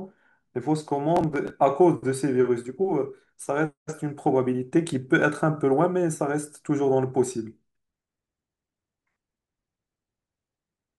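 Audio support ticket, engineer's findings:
Processor overload crackle, 1.17–1.50 s, in the speech. Gritty tearing burst, then clean again. Probable component: audio processing thread or CPU under load. Mechanism: a run of deadline misses on buffers of a few milliseconds each, a dozen or more skipped across the stretch, each leaving a hard-edged gap. The dense, rapid grit sets it apart from a single network dropout or from clipping distortion that tracks loudness.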